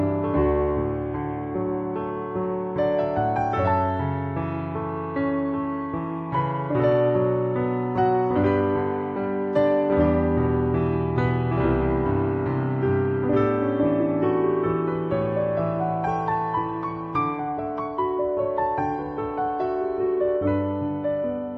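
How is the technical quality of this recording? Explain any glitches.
Listening through the recording, nothing stood out as a glitch or technical problem.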